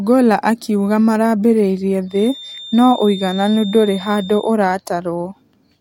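From 2.05 to 4.57 s, a feedback whistle sits at 3.6 kHz, roughly 20 dB under the speech. It is likely a loudspeaker-to-microphone loop held just short of runaway. Unlike a rising howl it never grows, and unlike a fixed electrical tone its level swells and fades slowly.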